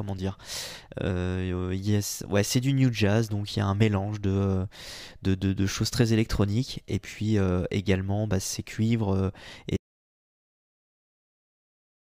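At 9.77 s, just after "bah ces cuivres et", the speech stops mid-flow and an audio dropout to silence runs to the end, about 2.3 s. The gap is silent with no room tone, most likely lost input while recording continued.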